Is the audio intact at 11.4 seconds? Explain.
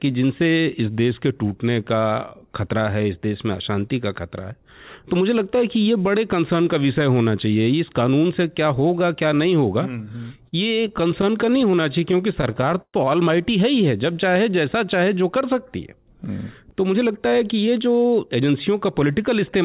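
No. 11.4 s falls inside a stretch of repeated stalls (stutter) from 9.89 to 12.97 s. Packets arrived late, so the jitter buffer kept running empty and the receiver stretched the last sound, up to 119 ms at a time. The audio drags and stutters, with nothing actually lost.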